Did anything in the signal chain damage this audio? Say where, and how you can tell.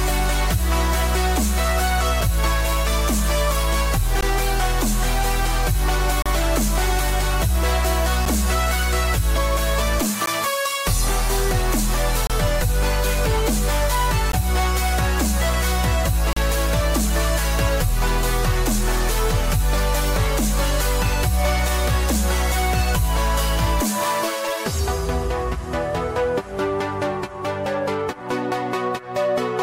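Yes. Gaps between stream segments at playback: hard-edged silent holes of 4 to 35 ms at 2.21, 4.21, 6.22, 8.25, 10.26, 12.27, 14.32 and 16.33 s, every 2 s, where mismatched segment timestamps leave gaps filled with silence.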